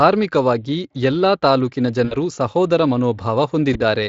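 At 2.05 to 2.16 s, just after "ಎಲ್ಲಾ ತಾಲ್ಲುಕಿನ", and again at 3.73 to 3.81 s, VoIP packet loss concealed by the speech codec fills the gaps with a stretched, fading buzzy tone or coloured noise rather than silence, which is what sets it apart from a plain dropout. The gaps fit about 60 ms and 20 ms of lost audio, and the weakened sound lingers as the light Speex coding resumes.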